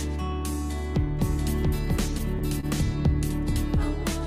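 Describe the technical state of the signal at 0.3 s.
At 0.3 s the signal is intact, with no audible fault at that moment.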